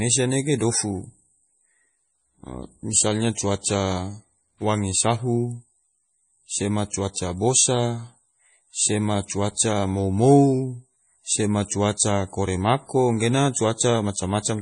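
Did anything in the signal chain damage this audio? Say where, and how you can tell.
Yes, at the codec stage, throughout the speech: nothing above 10.5 kHz, with a watery, swirling texture and smeared consonant attacks that fit a bitrate around 32 kbps. The likely cause is heavy MP3 compression; unlike a plain low-pass filter, weak frequency content flickers frame to frame.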